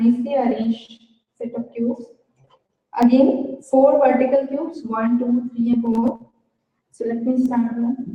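From 1.51 s to 7.46 s, word clock ticks occur about every one and a half seconds, roughly five in all. The receiver is free-running against the source clock, off by something like 15 ppm, so each slip drops or repeats one sample and produces a sharp tick of varying strength.

At 5.73 to 5.76 s, compressed frames are skipped. The decoder jumps past about five 20 ms frames, roughly 100 ms of sound, so the audio leaps ahead at the join.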